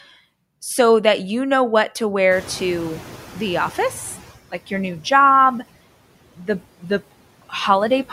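Noise suppressor catching up from 2.3 to 4.35 s, right after "you know what to": the room noise jumps by about 24 dB around 2.5 s, and the suppressor's noise estimate trails it. The noise comes through strongly at first, then sinks by about 12 dB over roughly two seconds as the estimate adapts.

Speech cut by the noise suppressor between 6.37 and 6.61 s: the suppressor mistakes parts of the speech for background noise and pulls them down with it, by as much as about 12 dB. Around a tenth of a second of sound is affected, leaving those parts swallowed and faint.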